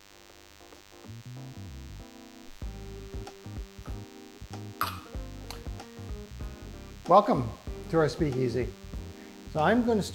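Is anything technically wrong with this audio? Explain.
Yes. DECT cordless phone buzz runs throughout the clip. A nearby DECT handset or base transmits a brief radio burst every 10 ms, and the audio circuitry rectifies it, producing a thin, steady 100 Hz buzz rich in harmonics, sitting roughly 25 dB below the main sound.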